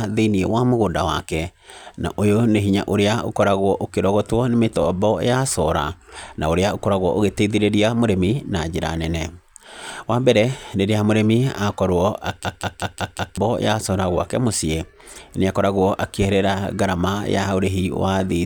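From 12.45 to 13.38 s a system hang loop replays a frozen 186 ms buffer five times, a 5.4 Hz stutter showing as identical waveform blocks.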